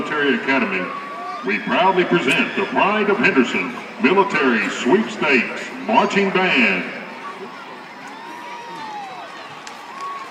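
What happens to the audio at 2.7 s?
Nothing goes wrong at 2.7 s; the audio plays through that moment intact, with no dropout, click or distortion.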